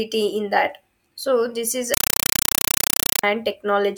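A compressed stream played as audio interrupts this speech recording from 1.94 to 3.23 s, replacing it with loud, chattering static. Undecoded Dolby Digital data reaches the output as samples: 5.33 ms noise bursts and silent padding repeating 31.25 times a second, which fits a 256 kbps AC-3 stream.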